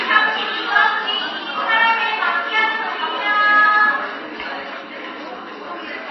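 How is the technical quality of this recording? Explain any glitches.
Technical quality is poor. Plainly audible codec damage runs through the whole clip. Nothing is heard above 5.8 kHz, and the sound turns watery. This is likely MP3 compression at a very low bitrate, near 23 kbps. Short of bits, the encoder cuts the treble and drops weak frequency lines frame to frame, which makes the swirling and smeared attacks.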